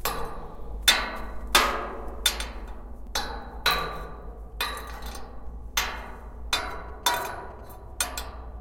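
From 6.65 to 7.61 s, GSM signalling bursts from a nearby phone, rectified by the audio circuit, give a galloping dit-dit-dit of short 217 Hz buzzes roughly 25 dB down, clustered rather than steady like mains hum.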